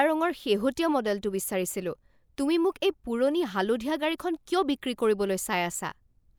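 Listening to the speech in this clip, nothing stood out as a technical problem.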